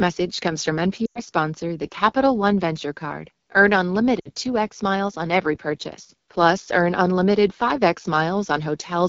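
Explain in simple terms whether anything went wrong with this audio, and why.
AMR wideband (HD Voice) codec, heard for the whole clip: the speech has a rough, raspy edge from start to finish. This phone codec rebuilds the voice from a compact model of its pitch and the shape of the mouth and throat, and fills the very top of the sound with shaped noise. Running at one of its lowest quality settings, as here, it has too little detail to work with, so the voice loses its smoothness.

Lost AMR speech frames, at 1.06 to 1.19 s and again at 4.20 to 4.30 s: the first gap comes right after "comes from" and before "sponsor the". In each gap, small chunks of the call were damaged over the radio link and thrown away. The phone filled in by repeating the last good sound while fading it down. Over the first gap, about 100 ms of sound is missing, so the voice quickly drops to near silence before returning. 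The second gap is shorter, about 60 ms, and the voice again drops to near silence for a moment.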